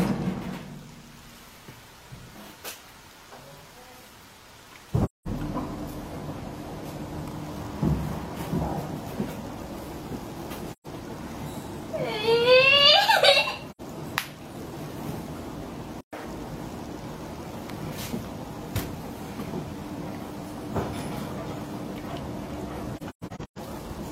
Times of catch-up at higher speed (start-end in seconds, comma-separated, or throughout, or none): 16.13-16.25